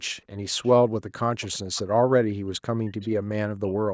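An echo canceller likely let part of its loudspeaker signal leak back: echo leak at 0.64–0.71 s, 1.42–1.58 s, 1.75–1.81 s and 3.02–3.08 s puts faint scraps of sound delayed by about 0.41 s under the speech, about 25 to 35 dB down. From 1.13 to 3.07 s, and again from 3.59 s to the end, speech is suppressed in double talk: with both sides active, the canceller likely cannot tell the talker from the echo. It pulls the sound down in pieces, sometimes by around 40 dB, for about 1.5 s in the first stretch.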